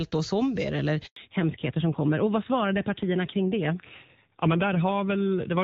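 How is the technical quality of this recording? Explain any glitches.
The recording has two linked faults: a brief dropout and then a lasting loss of bandwidth. Before that point the sound is full and clear, consistent with HD Voice at a high rate, around 23.85 kbit/s.

At 1.06 s a handover gap cuts the sound for 100 ms, until 1.16 s. While the call switched networks, no speech frames arrived, so the audio fades within a few tens of milliseconds into silence. This is a clean hole with no stutter or repeated fragment, which distinguishes it from ordinary packet loss concealment.

From 1.16 s to the end there is a fallback to narrowband. After the handover the call continues on an older narrowband codec, likely AMR-NB at about 7.4 kbit/s. Nothing above 4 kHz remains, so the speech sounds duller and rougher. Unlike a brief low-pass glitch, the change is permanent.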